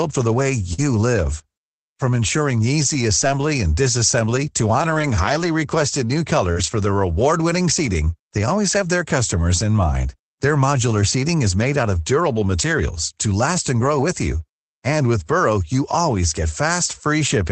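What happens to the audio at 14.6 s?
At 14.6 s the speech passes through intact, with no dropout, glitch or other fault, only the steady coding character and upper-frequency limit of the call path it travelled through.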